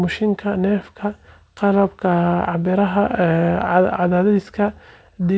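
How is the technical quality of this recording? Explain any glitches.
No faults are audible anywhere in this recording.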